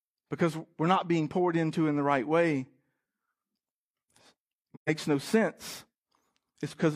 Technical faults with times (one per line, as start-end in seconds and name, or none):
4.74-4.89 AAC frame loss with muting